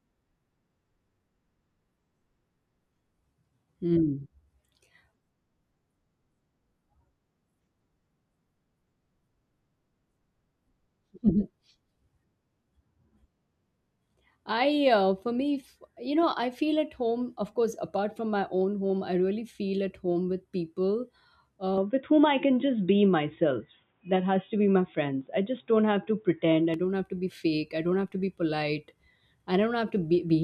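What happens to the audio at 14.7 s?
Nothing goes wrong at 14.7 s: the speech continues cleanly through that moment with no dropout, click or distortion to be heard.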